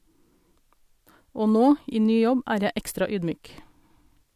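Nothing in the recording stood out as a technical fault on listening.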